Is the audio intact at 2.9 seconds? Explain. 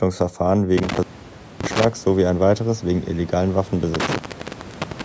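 Yes, the audio is intact at 2.9 seconds, with no fault at that moment.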